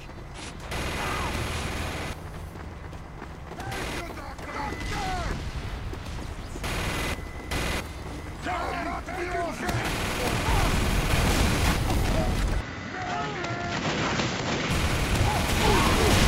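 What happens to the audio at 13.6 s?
At 13.6 s the sound is duller and narrower. Nothing comes through above 7.6 kHz, the level sits roughly 5 dB lower, and a faint new noise floor appears about 40 dB under the signal. This lasts from 12.61 to 14.71 s, and the change comes with no gap. The likely cause is the input switched to a poorer device, such as another microphone or a headset's call mode, with its own narrower band, tone and noise.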